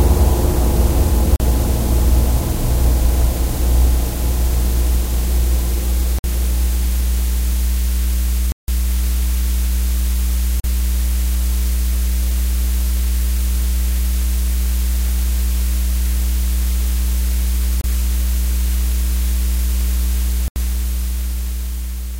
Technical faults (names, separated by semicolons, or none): block of digital silence